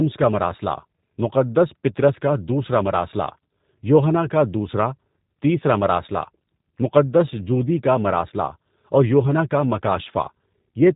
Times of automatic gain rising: none

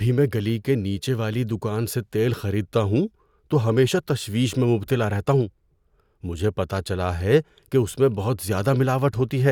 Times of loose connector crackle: none

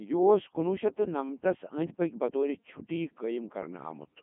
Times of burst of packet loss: none

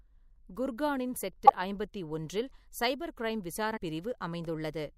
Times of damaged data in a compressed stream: 1.45-1.50, 3.76

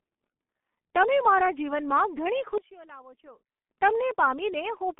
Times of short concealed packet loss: none

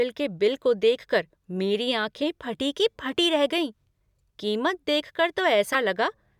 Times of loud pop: none

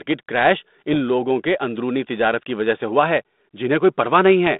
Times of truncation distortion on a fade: none

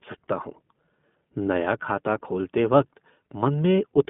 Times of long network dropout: none

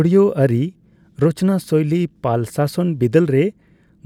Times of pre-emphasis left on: none

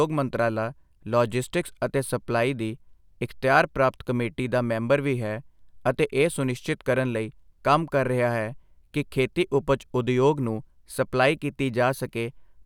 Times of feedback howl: none

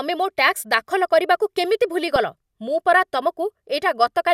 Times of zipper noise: none

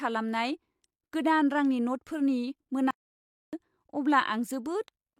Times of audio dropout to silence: 2.91-3.53

